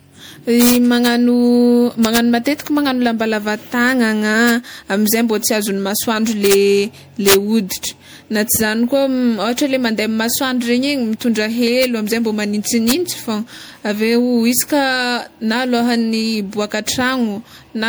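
Throughout the speech, generation loss, likely from roughly five passes through MP3 at a rate pointing to 96 kbit/s, leaves the sound swirly, hollow and smeared, with blurred consonant attacks.

Integer overflow, where peaks barely over full scale (about 1 dB or less) wrap to the opposite sign instead of limiting, cracks sharply at 0.61 to 1.06 s, at 2.05 to 2.17 s just before "matetiky magnagno", at 4.49 s just before "amizay mba", and at 6.46 to 6.54 s, 7.28 to 7.34 s, 8.56 s, 11.84 s and 12.9 s.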